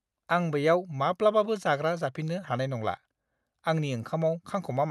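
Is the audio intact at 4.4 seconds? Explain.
Yes, at 4.4 seconds the speech comes through intact, with nothing at that moment beyond what the call path normally does.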